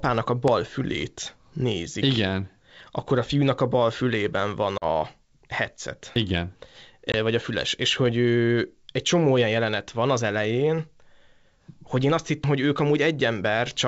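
It's a speech recording carried over wideband G.722 coding, and it has two kinds of glitch. First, there are four sudden skips at 0.48 s (right before "fülét nézik"), 2.8 s, 6.16 s and 12.44 s (just after "hogy én azt"). Each one is a jump forward in the sound, not a gap. The first three lose a few tens of milliseconds each. The last one is bigger, about a tenth of a second. That pattern is likely a dropped buffer (overrun), where the capture side didn't read its samples before the hardware overwrote them. Second, there are two hard-edged holes from packet loss on an ADPCM call. One comes right after "a bal fülében van", at 4.78 to 4.84 s, with 40 ms missing, which fits a couple of lost packets. A shorter one at 7.12 to 7.15 s drops 20 ms. After each hole the decoder's predictor and step size have lost sync with the sender, so the speech comes back slightly distorted, then settles within some tens of milliseconds.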